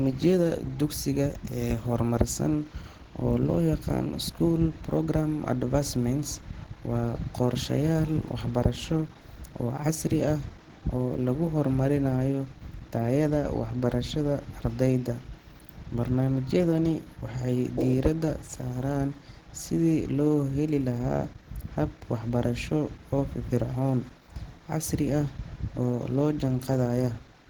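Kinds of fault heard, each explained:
Opus compression: The speech carries plainly audible codec damage from start to finish. It has a hoarse, muffled, grainy quality, though content still reaches up to about 20.1 kHz, so the bandwidth hasn't been narrowed. That sound fits Opus in its hybrid mode, where a speech coder handles the low band and the music coder fills in the highs, starved at a rate around 16 kbps. That's the likely cause.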